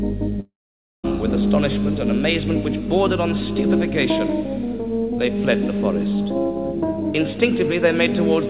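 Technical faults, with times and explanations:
0.40–1.07 s, long network dropout: the audio breaks off into a short buzzy continuation of the last sound that fades to about 0.53 s of silence. It then resumes with roughly 640 ms missing, likely because packets stopped arriving on the G.711 mu-law path.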